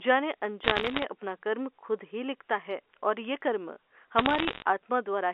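From 0.64 to 1.04 s and again from 4.18 to 4.62 s, bit errors on a digital phone line add sharp ticking crackle. Each flipped bit corrupts a single sample, so unlike packet loss, the narrowband speech underneath never drops out.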